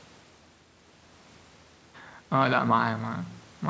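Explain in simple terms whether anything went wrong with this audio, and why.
Nothing went wrong; no faults can be heard here.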